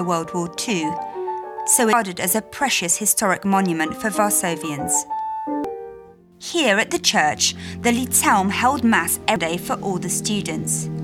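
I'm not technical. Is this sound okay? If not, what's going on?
No. There are three brief blips, at 1.93, 5.64 and 9.36 seconds, caused by damaged data in a compressed stream. Parts of the stored file are corrupted, so the player misreads those spots and briefly loses its place, producing a short chirp, squawk, click or gap.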